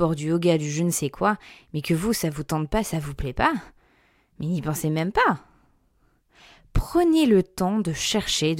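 No dropouts, glitches, distortion or level jumps are audible anywhere in this recording.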